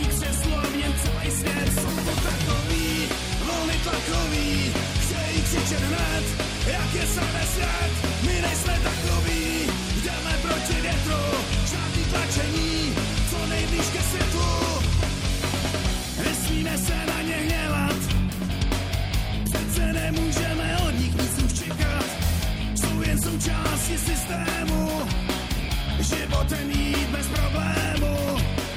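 No technical faults can be heard anywhere in this clip. There is nothing in the audio to place on a timeline or explain.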